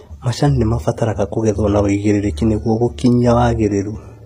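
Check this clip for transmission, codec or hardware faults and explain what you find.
HE-AAC compression runs throughout the speech, from start to finish. The treble sounds synthesised rather than captured, which points to the likely cause: a low-bitrate HE-AAC v2 encode, around 24 kbps. Only the lower spectrum is coded directly, and the upper bands are rebuilt by copying lower content upward under a coarse envelope. The damage is plainly audible: s sounds turn gritty and metallic, the high harmonics don't line up across the crossover, and nothing is present above 15.4 kHz.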